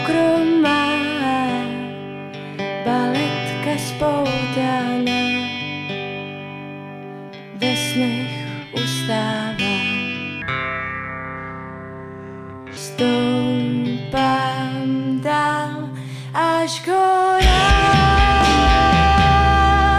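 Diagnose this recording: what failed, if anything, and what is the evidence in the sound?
A wrong sample rate at the playback stage: from 10.42 to 12.77 s, audio captured at 48 kHz is clocked out at 32 kHz with no conversion. The sound slows to 0.667 times speed and drops about 7 semitones, both by the same ratio.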